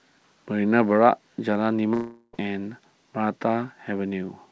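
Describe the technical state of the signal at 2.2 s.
At 2.2 s the speech is gone, replaced by a buzzy continuation of the last sound that fades away, with a brief silence just before the speech resumes at 2.35 s. This span, from 1.94 s, is most likely a long network dropout: about 0.4 s of audio never arrived, the receiver filled the gap by stretching the preceding sound, and the missing material is not recovered. The band-limited G.722 sound, with nothing above 8 kHz, is the same on either side of the gap.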